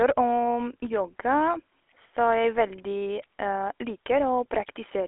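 From start to end, the speech carries GSM full-rate codec damage, consistent with 13 kbps. A coarse pulse-driven vocal model leaves a buzzy, gravelly roughness. A spectrogram shows a hard ceiling near 3.8 kHz and energy confined roughly to 300 Hz–3.4 kHz.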